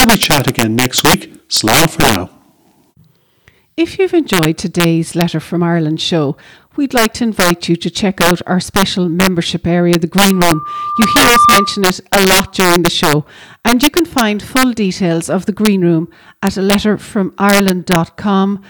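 Integer overflow runs throughout: the gain is pushed about 11 dB too far, and roughly one percent of samples wrap to the opposite sign instead of limiting, cracking on the loudest peaks.

Loudspeaker feedback squeal sounds from 10.31 to 11.96 s, after "special membership area the": a 1.2 kHz loop tone builds over about a second to about 5 dB above the speech, ending before "a lot during the".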